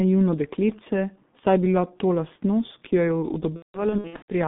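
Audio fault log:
Throughout: G.723.1 codec. The speech sounds muffled and hoarse, confined to a narrow band from about 150 Hz to 3.7 kHz, with consonants smeared and heavy coding roughness on every syllable. The band and grain fit a roughly 6 kbit/s internet-telephony codec that works in 30 ms frames. It rebuilds the voice from a coarse model that it updates only slowly, so rapid changes in articulation blur together and fine detail is lost.
3.56 to 4.31 s: VoIP packet loss concealed by the speech codec. Near the end of the clip the speech breaks into stretched, buzzy or noisy fragments that fade and then recover weakly, several times over about 0.72 s. About 450 ms of audio is missing, in scattered gaps with a longest run of about 180 ms. The decoder fills each gap by repeating its last pitch and filter at falling gain. Because each frame builds on the one before, the voice stays thin and distorted for a while after each gap.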